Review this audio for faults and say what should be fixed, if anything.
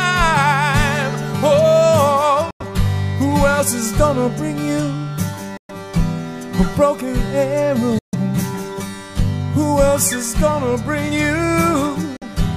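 The audio has four gaps that sound like a Bluetooth dropout: packets likely missed their delivery window to the headphones and were discarded, so the output cut to silence until good data arrived. The holes fall at 2.51–2.62 s, 5.57–5.71 s, 7.98–8.15 s and 12.16–12.23 s. After each gap the sound resumes further along, as though it had kept playing, so the missing stretch is lost. Keep the headphones close to the source, away from competing 2.4 GHz traffic, or use a wired connection.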